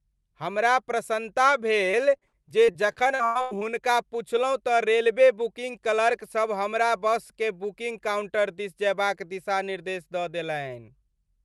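From 1.91 to 3.64 s, between "हमरा प्रसन्नता" and "पुछलहुँ तँ रेलवे", the speech turns choppy and robotic, with short pieces dropping out. This is repeated packet loss: about a dozen gaps arrive in quick succession, the longest around 96 ms, and each is bridged by stretching the last received sound. Roughly a quarter of that stretch is patched audio, through a call path whose top end stops near 12 kHz.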